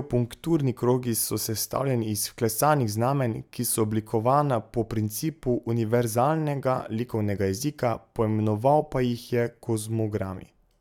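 Nothing in this speech recording points to a technical fault at any moment, and the signal holds steady throughout.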